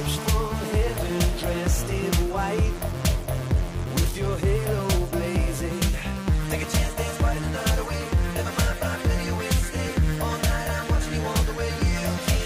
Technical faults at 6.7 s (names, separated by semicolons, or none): none